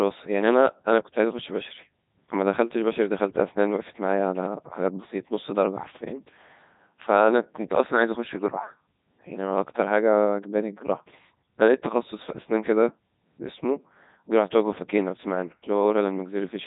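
From start to finish the speech passes through a Codec 2 vocoder, and the damage is heavy. Only pitch, voicing, loudness and a rough spectral shape survive; the decoder rebuilds the voice from sine waves, so it comes out robotic and buzzy, with nothing above 3.8 kHz. This is even at the codec's top rate of about 3.2 kbit/s. Unlike a low-bitrate transform codec, this is a resynthesised voice.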